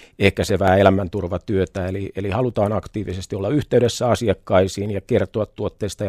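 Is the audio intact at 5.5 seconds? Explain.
Yes, the speech at 5.5 seconds plays through cleanly, with no audible fault at that moment.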